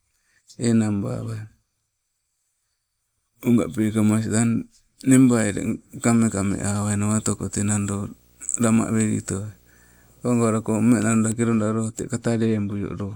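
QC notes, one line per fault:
7.10–10.90 s, video or display buzz: a low buzz at 59.94 Hz appears under the speech with a grainy hash riding above it, plus a faint, very high whine near 15.7 kHz, all sitting about 35 dB below the signal. A screen or video cable is coupling its picture timing into the audio path, so the buzz follows the field rate and the whine the line rate. The 15.7 kHz tone and the 59.94 Hz pitch rather than 60 Hz separate it from mains hum.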